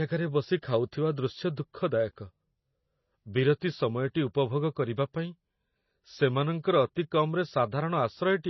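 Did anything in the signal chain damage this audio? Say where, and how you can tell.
Yes. MP3 compression damages the speech throughout, likely at the codec stage. Nothing sounds above about 5.9 kHz, and weak spectral detail flickers in and out, giving a watery, swirly texture with chirpy sibilants and smeared attacks, which fits a very low bitrate near 24 kbps.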